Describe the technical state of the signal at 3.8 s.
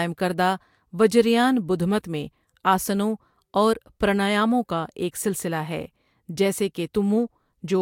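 At 3.8 s the speech signal is intact, with no audible technical fault at that point.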